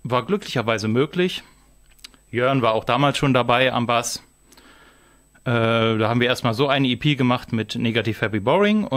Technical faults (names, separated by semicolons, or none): USB whine